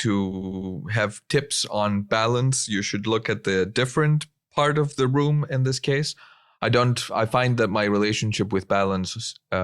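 A run of compressed frames in this speech recording was delivered more than once, so the decoder replays a 100 ms block four extra times between 0.31 and 0.71 s, just before "have tips on balance". This repeated-frames fault is heard as a stutter that adds 400 ms to the audio.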